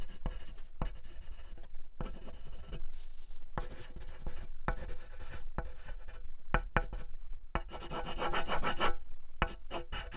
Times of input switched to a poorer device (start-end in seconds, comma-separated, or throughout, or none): none